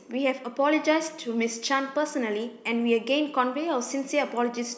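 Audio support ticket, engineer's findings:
Speech signal reviewed across the whole capture with no technical fault found; level, continuity and timing of the recorded path are intact.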